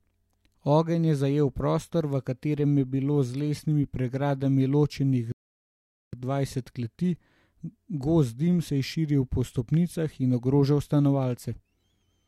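At 5.32 s, right after "lesenimi pregradami ločenih", the speech drops into silence. It returns at 6.13 s with "dvajset kleti". This is a rebuffering stall: playback drained its download buffer and waited for more data. It picked up exactly where it halted, so nothing is skipped, but about 0.81 s of dead air is added.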